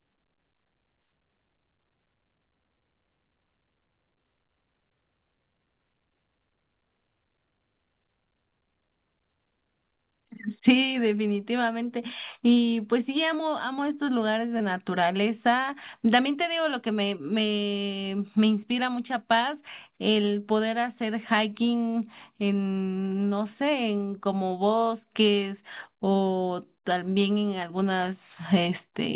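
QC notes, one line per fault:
12.54–12.58 s and 14.58–14.62 s, short concealed packet loss: about 20 ms of audio failed to arrive in time at each point, and the receiver's concealment filled the gap by extending the preceding sound, from its pitch where voiced and with shaped noise where not, before crossfading back to the real signal. Each is heard as a brief smear or wobble within audio band-limited to 4 kHz, which fits a G.711 A-law call path.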